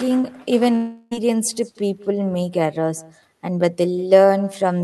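Speech arriving over a call path, with the top end stopping near 12 kHz as the Opus codec would leave it, carries an echo with no canceller throughout. A faint, thinner copy of the talker, about 23 dB down, trails each phrase by roughly a fifth of a second. It is a distinct delayed repeat rather than the smeared tail of room reverberation. From 0.75 to 1.13 s the sound freezes into a buzzy, fading continuation of the last syllable instead of going silent, then resumes with that stretch gone. This is likely a long network dropout that the receiver concealed. Its length and the missing material set it apart from a momentary click or glitch.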